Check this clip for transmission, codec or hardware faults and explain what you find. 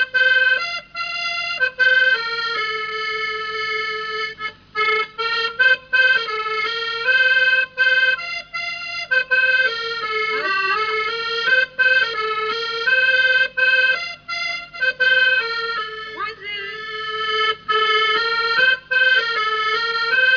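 No faults can be heard anywhere in the clip. There is nothing to report at any point in the audio.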